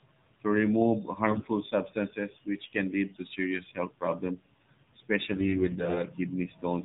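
Throughout, the speech carries AMR narrowband mobile codec coloration. Nothing above 4 kHz survives, and the vocal-tract model, driven by sparse pulses at a low bit budget, makes the voice plainly buzzy and synthetic, which fits one of the lower AMR-NB modes around 7.4 kbps.

AMR bit errors appear three times. The first is at 1.30 to 1.48 s, between "to remove" and "substances which can". The second is at 3.10 to 3.17 s, between "substances which can" and "to serious health problems". The third and longest runs from 5.32 to 6.03 s. Flipped bits of a few percent in the weakly protected part of each frame misplace the excitation pulses and skew the pitch, gain and spectral details. Pitch and level roughly hold, but the voice turns hoarse, scratchy and gargly for each span.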